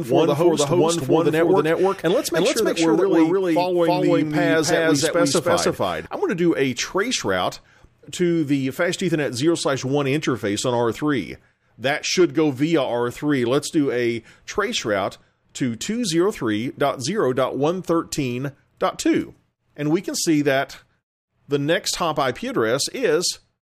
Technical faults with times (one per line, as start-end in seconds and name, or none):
0.00-6.06 doubled audio track